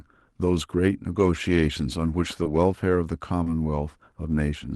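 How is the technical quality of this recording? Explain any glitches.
The recording carries two brief packet-loss glitches over a call link. The audio came through Opus at a 12 kHz bandwidth cut-off, with a coding texture that fits about 32 kbps.

Short concealed packet loss, at 2.43 to 2.48 s and again at 3.43 to 3.49 s: about 20 ms of audio failed to arrive in time each time. The receiver covered the gap by extending the preceding sound, pitched if voiced and noise-like if not, for about 21 ms and 25 ms respectively, then crossfaded back into the real signal. The result is a short smear or wobble, and a quick consonant there may drop out.

Lost packet rebuilt from error correction, at 2.45 to 2.47 s and 3.46 to 3.48 s: inside each of those concealed stretches, a 20 ms packet was recovered from the low-bitrate backup copy that Opus tucks into the following packet. Because the decoder played that copy rather than silence, nothing goes missing. 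Those 20 ms sound coarser and noisier than the surrounding audio, a grainy patch blended into the smear.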